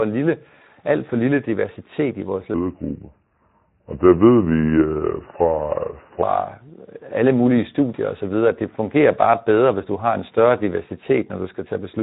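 From start to finish the speech carries the sound of the Speex codec. The excitation is starved of bits, so voices come out grainy and hoarse, and any content above 8 kHz is a hiss-like fill rather than real detail. The damage is plainly audible and fits a low setting of around 11 kbps. Unlike packet loss or dropouts, it is a constant roughness on every syllable, not a series of gaps or glitches.

Right after "lille diversitet i vores", from 2.54 s to 6.23 s, there is a section at the wrong speed. It runs at 0.776 times its proper rate, so the voice drops about four semitones and turns slow and heavy, then snaps back to normal at 6.23 s. The likely cause is that this stretch was played against the wrong clock. A pitch-shift effect would change the pitch and keep the timing, but here pitch and tempo drop together, which points to a speed error.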